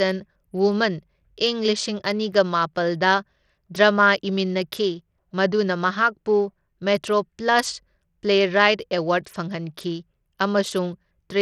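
It's a speech clip with Bluetooth SBC compression damage running the whole way through: the top end keeps dropping out and flickering, with a gritty, grainy edge riding on the sound. That's likely a starved SBC link, which fits a bitrate down around 80 kbps.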